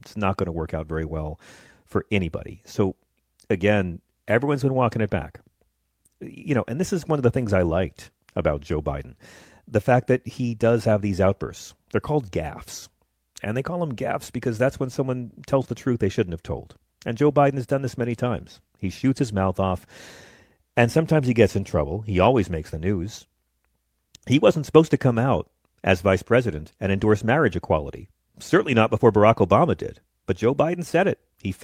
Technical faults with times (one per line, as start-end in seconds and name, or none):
none